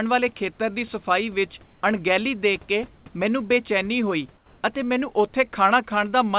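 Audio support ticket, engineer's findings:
Comfort noise in place of the background at 1.64–1.82, 2.96–3.06 and 4.36–4.62 s. The room tone goes flat and about 2–3 dB quieter, likely DTX cutting transmission in pauses.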